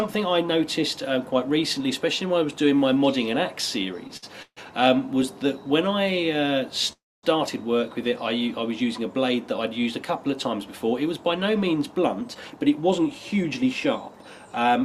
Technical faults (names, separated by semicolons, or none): short stall from a late packet; call audio freeze; jitter buffer speed-up